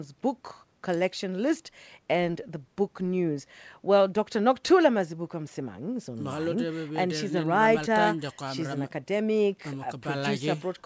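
No technical faults are audible.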